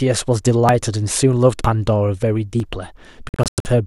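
At 0.69, 1.65 and 2.6 s the speech skips forward, each time losing a few tens of milliseconds and splicing the edges together without any gap. These are audio missing between chunks, likely from a recorder working in one-second blocks and dropping audio at each handover.

From 3.29 to 3.66 s the speech breaks up into several muted holes, about 240 ms lost across 360 ms, the longest near 96 ms. This is a digital broadcast dropout: the receiver muted while corrupted frames failed their checks, then resumed once clean frames arrived.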